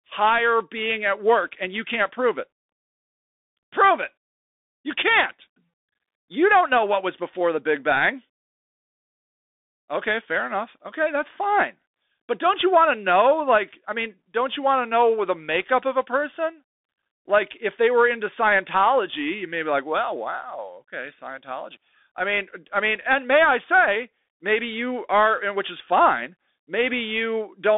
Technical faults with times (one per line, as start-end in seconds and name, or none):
0.00-27.77 Bluetooth CVSD headset codec